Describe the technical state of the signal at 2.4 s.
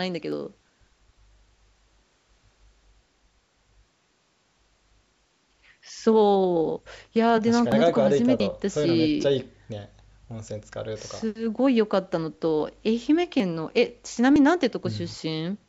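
At 2.4 s the speech is intact, with nothing wrong beyond the normal call microphone processing, which trims the lowest bass.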